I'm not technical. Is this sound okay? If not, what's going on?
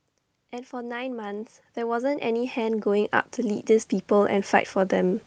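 No, not quite. From about 0.51 s until the end, the level keeps creeping up. That's automatic gain rising: the automatic gain control decided the input was too quiet and slowly turned it up, the way someone might ease a volume knob. Because it boosts everything it hears, the voice and the room noise behind it swell together, so the background gets louder as the clip goes on, not just the speech.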